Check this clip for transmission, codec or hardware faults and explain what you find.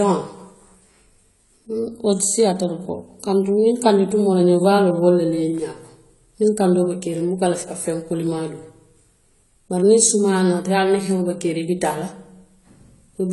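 The speech carries AAC compression damage from start to finish, and it's plainly audible. Nothing sits above about 11.5 kHz, and what's left sounds dull and smeared, with a warbly, fizzy edge on sibilants. That's likely a low-bitrate AAC-LC encode, which fits something around 32 kbps, where the encoder drops the top band and starves the remaining spectrum of bits.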